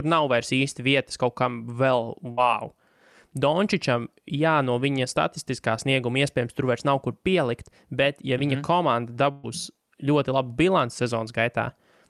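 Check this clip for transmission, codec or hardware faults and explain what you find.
Two bursts of packet loss affect the clip, at 2.31 to 2.39 s and 9.31 to 9.45 s. Consecutive packets went missing, so the receiver stretched the last sound for about 60 ms, then about 120 ms, fading it into a held buzz or hiss before the speech resumes with that stretch gone.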